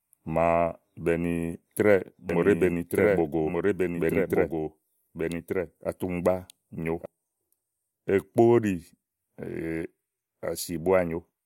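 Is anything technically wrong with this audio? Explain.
Yes. From 2.30 to 7.06 s, a doubled audio track appears. A full-band copy trails about a second behind, roughly 5 dB quieter, likely from a slower second capture path.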